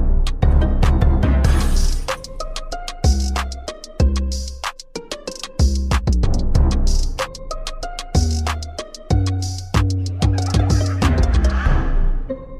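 At 0.49 to 0.53 s there is damaged data in a compressed stream: a short stretch of the encoded audio is corrupt, so the decoder misreads those frames and loses sync until it locks onto the next valid header. It is heard as a brief glitch.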